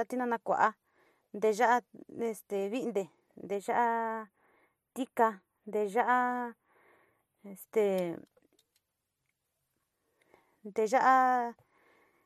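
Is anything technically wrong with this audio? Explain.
Yes. From 3.55 to 7.63 s, channel delay (comb filtering): one channel arrives a few samples late, around 0.1 ms, and the mono sum cancels near 5 kHz, leaving the speech hollow and phasey.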